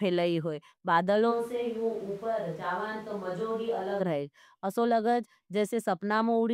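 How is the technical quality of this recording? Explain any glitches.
The recording has one clear glitch. From 1.33 s to 3.99 s the speech abruptly turns roomy and hollow, with thinner bass, a drop of around 5 dB in level, and background noise rising to only about 25 dB below the speech. At 3.99 s it snaps back to the close, full sound. This is a switch to a distant microphone, likely because the close microphone dropped out and a farther one, picking up more room reflection and ambient noise, covered the gap.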